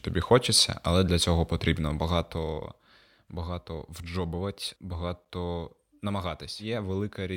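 Between 1.68 and 3.04 s a fast ticking rides on the speech: zipper noise, the level falling about 10 dB in unsmoothed 1 dB steps.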